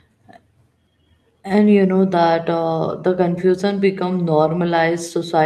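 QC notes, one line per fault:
No faults found.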